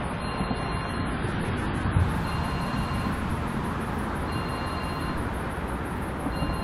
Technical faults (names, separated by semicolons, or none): adaptive stream starting at a low bitrate